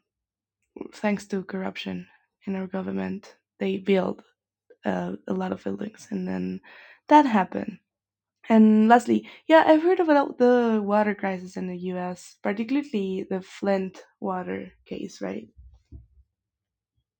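A faint metallic shimmer rides on the sibilants from start to finish, with the top of the speech band dulled. This is imaging from linear upsampling: straight-line interpolation, which fits a doubling from 24 kHz to 48 kHz, leaves a mirrored spectrum between 12 kHz and 24 kHz, roughly 45 dB down.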